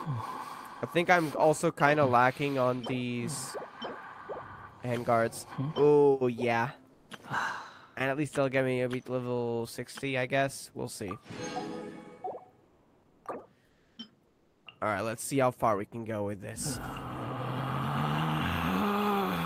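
Comfort noise replaces the background at 6.93 to 7.09, 12.63 to 13.25, 13.65 to 13.97 and 14.27 to 14.65 s. The real background drops out, likely from discontinuous transmission. Steady, featureless noise fills each gap, about 4 dB quieter at first, then about 1, 0 and 2 dB.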